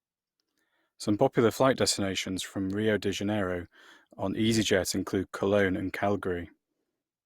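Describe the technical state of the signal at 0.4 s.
Generation loss is present at 0.4 s, as it is throughout the speech. The sound is swirly, smeared and hollow, with blurred attacks, worse than a single lossy pass would leave. The likely cause is repeated Opus encoding, about five times, at what sounds like 64 kbit/s, with each pass requantising on a shifted frame grid so that noise accumulates.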